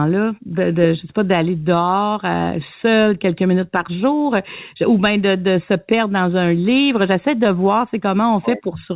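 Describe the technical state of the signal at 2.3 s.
At 2.3 s the speech is intact, with no dropout, glitch or distortion, only the ordinary narrowband character of the call path, where nothing reaches above 4 kHz, as fits a standard telephone-grade codec.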